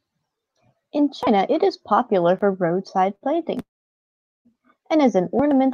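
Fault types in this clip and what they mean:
Short stall from a late packet: at 3.15 s, just after "popular for roadside", one packet arrives late and the receiver holds the last sound for about 55 ms before carrying on from the same point. Nothing is lost. It differs from a freeze because the hold is brief and stays continuous with the sound around it. The later timing shifts by only 55 ms.
Call audio freeze: from 3.62 s to 4.47 s, ending just before "and as an", the sound stops progressing for about 0.83 s. The final sound is continued briefly and fades, then about 0.8 s of silence. The audio then resumes exactly where it halted, with nothing missing. The likely cause is packets held up in transit, which emptied the jitter buffer. Unlike the short stall, the wait is long enough for the fill to die away into silence.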